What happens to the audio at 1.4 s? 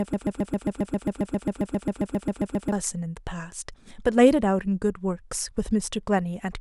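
At 1.4 s the speech is caught in a broken-record loop running from the very start to 2.72 s: a 134 ms fragment repeats exactly and back to back, likely from a stalled player or stream resending its last buffer. Unlike an echo, the repeats never fade, and the audio due in that span is lost.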